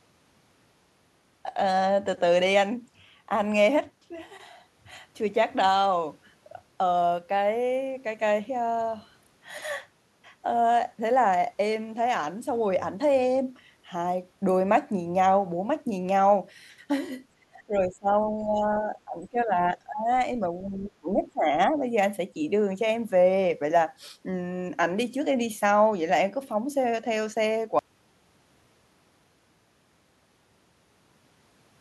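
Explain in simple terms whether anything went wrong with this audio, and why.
Between 17.41 and 21.53 seconds, the speech dips sharply four times: 17.41 to 18.17, 18.37 to 19.51, 19.69 to 20.08, and 20.41 to 21.53. Each dip lasts from under half a second to about a second. This is speech suppressed in double talk. It likely happened because both sides of a call spoke at once. The echo canceller could not tell the talker from the echo, so it turned everything down.

At 27.79 seconds the sound stops completely and stays silent to the end. This is an audio dropout to silence. The gap is true silence, with no room sound at all. The likely cause is that the input was lost, for example through a dropped connection or an accidental mute, while recording continued. Anything said after that point is gone.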